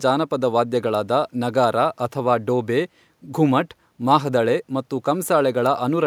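No technical faults can be heard anywhere in the recording.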